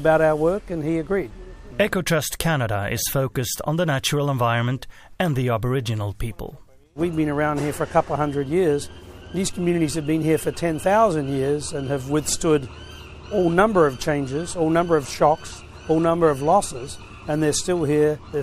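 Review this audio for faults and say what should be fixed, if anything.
No faults; nothing to fix.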